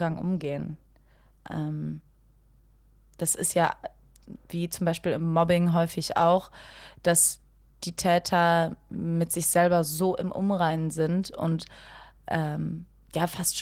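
From start to finish there's mains hum under the speech, a steady 50 Hz drone with a few low harmonics, sitting roughly 25 dB below the talker. It sounds like a ground loop or a nearby transformer leaking the power line into the signal, and the Opus compression on top is light.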